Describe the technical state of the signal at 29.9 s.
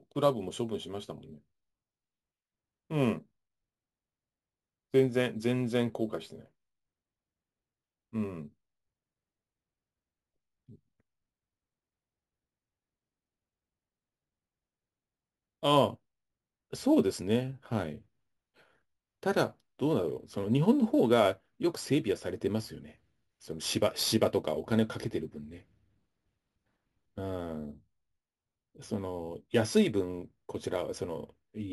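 At 29.9 s the whole clip carries imaging from sample-and-hold upsampling. Audio at what sounds like a 16 kHz rate was raised by repeating samples unfiltered, leaving a metallic fizz about 21 dB down. A spectrogram shows mirrored speech harmonics from 8 to 16 kHz; the waveform shows staircase steps.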